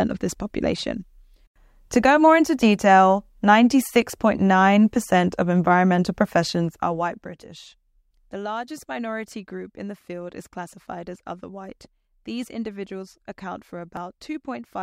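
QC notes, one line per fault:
7.97–13.97 s: periodic USB or driver dropouts. About four short losses, spaced every 2.0 s, each removing a couple of milliseconds of speech, which is skipped rather than filled with silence. The sudden splice makes a regular tick wherever speech is present. On the waveform, each one is an abrupt discontinuity where the trace jumps to a new value. On the spectrogram, each shows as a thin vertical broadband streak at even 2 s intervals.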